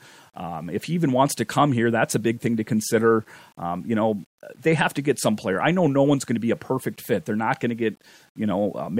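Speech with grainy distortion throughout that tracks the signal and turns gritty in quiet passages, likely low bit depth without dither, about 9 bits rounded, with error roughly 40 dB down, unlike steady dither hiss.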